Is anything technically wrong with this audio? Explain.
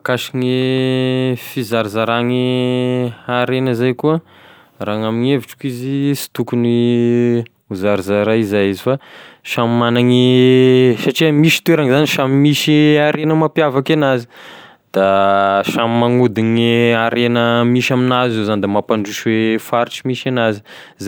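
No, nothing technically wrong stood out on listening to this speech recording.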